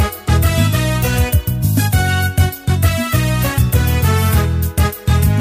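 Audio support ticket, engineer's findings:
No audible faults found in the signal; level, continuity and frequency balance show nothing to attribute to any playback or processing component.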